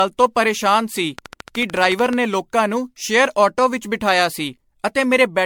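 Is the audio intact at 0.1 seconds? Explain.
No. At 0.1 s, as through the whole clip, the speech carries generation loss, likely from repeated MP3 encoding, around seven passes at something like 96 kbit/s. Each re-encode requantises on a shifted frame grid, so errors pile up: the sound is swirly, hollow and smeared, with softened attacks. A spectrogram would show flickering holes and blurred onsets, with nothing above 19.9 kHz, and the waveform's transients look rounded.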